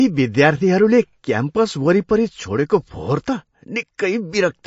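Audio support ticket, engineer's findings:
MP3 compression, whole clip: speech band stops dead near 7.6 kHz. Watery, swirly texture as weak spectral lines drop in and out between frames; sibilants chirp metallically, consonant attacks smeared. Damage plainly audible. Likely cause: MP3 encoder starved of bits, consistent with a low bitrate around 35 kbps, forcing the treble cut and zeroed lines.

Pre-echo, 3.98 s: brief hiss, about 12 ms, ahead of a sharp onset; the attack itself sounds softened. Mechanism: transform block spreads quantisation noise evenly across its length, so noise scaled for the loud attack late in the block leaks into the quiet moment before it.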